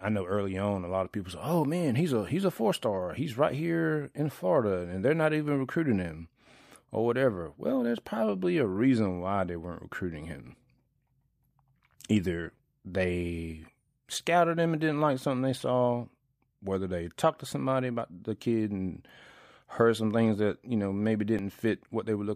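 At 21.39 s, just after "that you know maybe", the waveform jumps abruptly instead of continuing smoothly. There is no gap or silence. The audio simply skips ahead. The likely cause is a dropped buffer (overrun): the recording software did not read a block of samples before the hardware overwrote it, so that stretch was lost and the audio on either side was spliced directly together. Only a millisecond or two is missing, so nothing of the words is lost. The fault is heard as a jump in the sound.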